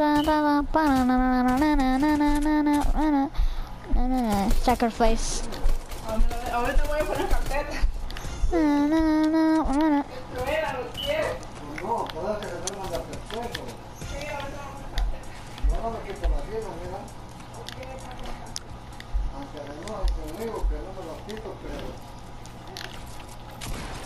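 Nothing in the audio stood out as a technical problem on listening.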